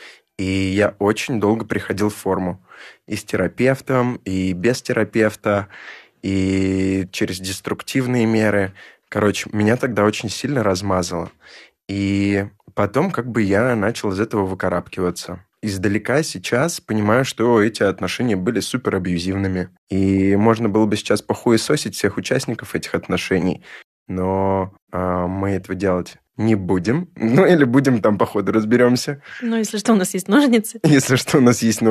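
Nothing in this speech recording stood out as a technical problem on listening.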